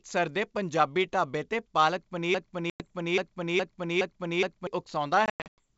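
At 2.35 s a broken-record loop begins, most likely from the stream stalling and resending the last fragment it held: a 0.42 s slice of speech repeats exactly, six times back to back, until 4.67 s, and the speech that belonged there never plays.

Within that stretch, at 2.70 s, just after "ਦੇ ਪੰਜਾਬੀ ਢਾਬੇ 'ਤੇ", packet loss on an ADPCM call cuts a hard-edged 0.1 s silent hole. When sound resumes at 2.81 s, the decoder's predictor and step size are out of step with the sender's, so the speech comes back slightly distorted before settling.

The same loss recurs from 5.26 s to 5.67 s, this time scattered: about 0.26 s goes missing across 0.32 s, in gaps up to 0.1 s long, which points to a cluster of small packets dropping. Each gap is followed by the same brief, slightly distorted recovery, heard against the clean wideband G.722 telephone band.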